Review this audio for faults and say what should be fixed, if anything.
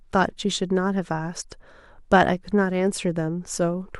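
No faults to fix in this speech recording.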